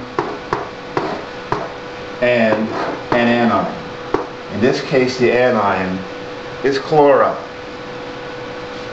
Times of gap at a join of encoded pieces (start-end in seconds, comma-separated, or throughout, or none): none